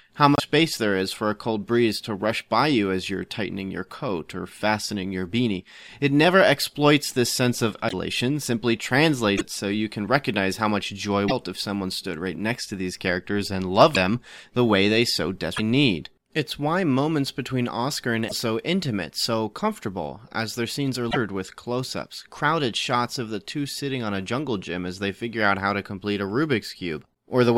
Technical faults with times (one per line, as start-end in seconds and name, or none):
0.35-0.40 broken MP3 bit reservoir
7.88-7.93 broken MP3 bit reservoir
9.37-9.41 broken MP3 bit reservoir
11.27-11.32 broken MP3 bit reservoir
13.94-13.96 broken MP3 bit reservoir
15.56-15.60 broken MP3 bit reservoir
18.27-18.32 broken MP3 bit reservoir
21.10-21.17 broken MP3 bit reservoir